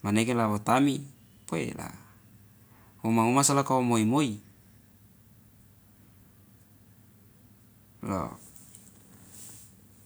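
No technical faults can be heard anywhere in the speech recording; the signal stays continuous and steady in level, with no interruptions or disturbances.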